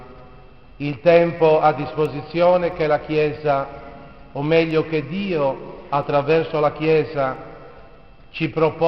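From 0.73 s to 8.69 s there are word clock ticks: short, sharp clicks at a steady rate of roughly one every 0.7 s, about fifteen in all, with uneven strength. The receiving device is running on its own clock rather than locking to the sender's digital link, and the two differ by roughly 30 ppm. Each time they slip past each other, a single sample is dropped or repeated, and that produces a click.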